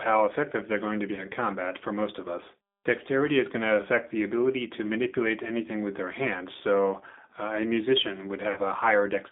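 Throughout, the speech carries G.729 codec damage: the line band runs only from about 200 Hz to 3.6 kHz, and the rough, slightly synthetic texture, built from a filter, pitch predictor and sparse pulses, fits 8 kbit/s G.729A coding. At 1.15 to 1.21 s, between "they're going to be" and "combat for most of", VoIP packet loss concealed by the speech codec produces a brief, fading smear, consistent with one lost 20 ms packet. At 8.52 to 8.59 s a longer concealment follows, pointing to about 40 ms lost, and the sound stays weakened as the decoder recovers.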